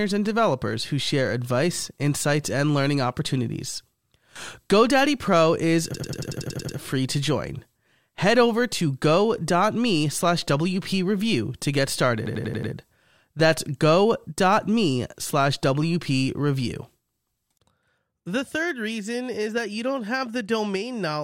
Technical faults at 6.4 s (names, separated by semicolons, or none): system hang loop